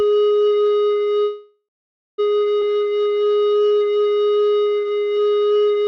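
A short piece of music that's been through a call path, and you can hear it: the top end stops around 8 kHz, which fits Opus at roughly 64 kbps. The first problem is a call audio freeze from 1.23 to 2.20 s. The music hangs for about 0.95 s, with the last sound carried on as a fading buzz or hiss before dropping to silence for about 0.53 s of that stretch. It then picks up exactly where it left off, so nothing is lost, but everything afterwards now runs almost a second late. The likely cause is packets held up in transit, which let the jitter buffer run dry. Right after that, between 2.60 and 2.63 s, there's a skip ahead. Playback lurches forward with barely any gap, and roughly half a second of music simply isn't there. The two sides are butted together almost directly, which is what happens when a chunk is thrown away while later audio is already queued, clawing back some of that delay. 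Finally, from 2.72 s to 5.84 s there's a jitter buffer slow-down. The music plays at about 84% speed with the pitch unchanged. Sustained sounds get stretched and there's a faint warble here and there, because single pitch periods are being repeated over and over. That adds about 0.52 s in total as the receiver rebuilds its reserve.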